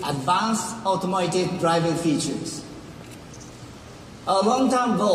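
Damaged data in a compressed stream causes a brief glitch from 4.81 to 4.85 s, where the decoder misreads corrupted frames; it shows as a short disturbance on the spectrogram.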